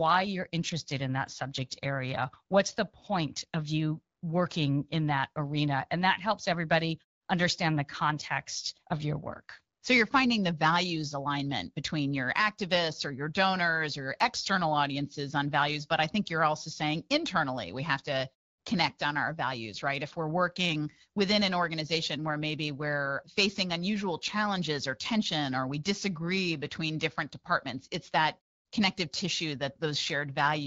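Nothing in the recording stood out on listening as a technical problem.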